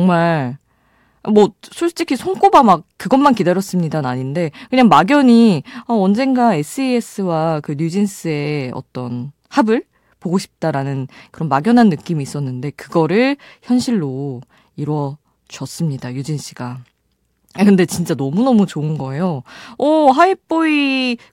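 No technical faults can be heard anywhere in the speech signal.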